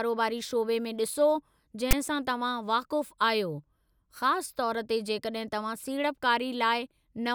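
A harsh, one-sided rasp followed by a brief silence, hard-edged, cuts into the speech from 1.91 to 1.93 s: file tags played as audio, text and padding decoded as samples.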